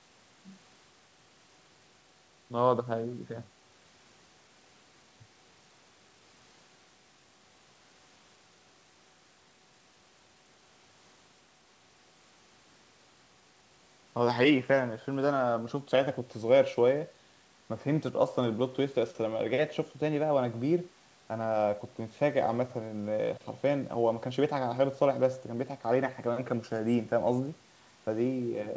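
No technical faults can be heard in this speech.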